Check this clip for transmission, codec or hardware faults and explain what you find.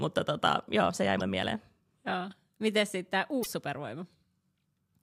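A likely broken MP3 bit reservoir affects this speech twice. When stretches of the MP3 stream drop out, the frames that follow reach back into earlier frames for data that is no longer there and decode someone else's bytes instead. Just after "tota joo se jäi", at 1.19 to 1.22 s, and after "sitten tämä", at 3.42 to 3.46 s, the audio skips ahead and leaves a brief chirp, noise burst or short hole, each roughly one or two 24 ms frames long.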